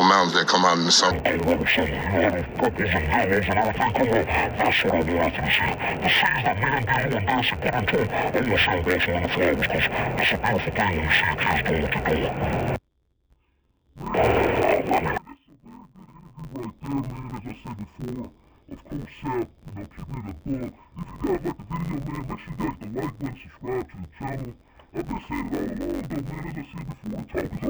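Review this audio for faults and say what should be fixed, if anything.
From 1.11 s to the end, the sound turns dull and robotic. A steady buzz runs through it at about 91.9 Hz, with no clear octave drop. This is interleaved audio read as planar. Each 10.88 ms block holds alternating left and right samples. The first half is taken as left and the second half as right. Each half then plays at half speed. The blocks are short, so the result is block-rate buzz rather than a lower pitch. To prevent it, make the reader's channel layout match the interleaved format the source delivers.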